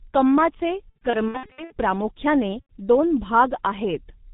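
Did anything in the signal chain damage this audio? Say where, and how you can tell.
Yes. At the codec stage, G.723.1 coding runs throughout, with a heavily muffled, hoarse character that fits its 6.3 kbit/s mode. On a spectrogram, nothing appears above 4 kHz, and consonants look smeared.

At the network stage, VoIP packet loss concealed by the speech codec appears at 0.89–1.73 s in scattered gaps of up to 60 ms, and at 2.60–2.70 s. Each gap shows as a stretched, buzzy tone or coloured noise whose waveform envelope decays.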